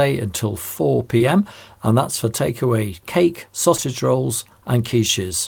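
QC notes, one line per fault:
1.17–1.22 s, short concealed packet loss: about 20 ms of audio never arrived, and the receiver bridged the gap with roughly 26 ms of synthesized continuation of the preceding sound before blending back, heard as a brief smear just before "and that's for takeaway".
3.76–3.84 s, short concealed packet loss: two consecutive 20 ms losses, each filled with 20 ms of extrapolated signal, directly after "that's for takeaway cake". The back-to-back fill stretches the concealment into an audible wobble.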